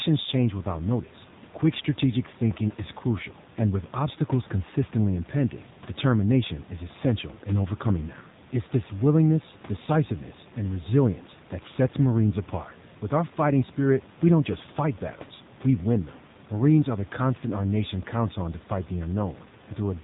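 From start to end, the speech carries AMR narrowband mobile codec damage. Nothing above 4 kHz survives. The voice sounds buzzy and synthetic, which fits a low bitrate near 7.4 kbps.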